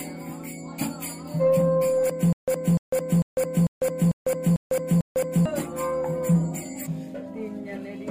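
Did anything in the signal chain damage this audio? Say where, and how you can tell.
Yes. From 2.33 to 5.46 s there is stutter with silent gaps: a 296 ms fragment repeats seven times, each followed by about 151 ms of digital silence, on an even 447 ms cycle. This likely comes from a playback or stream stall replaying its last buffer on each retry.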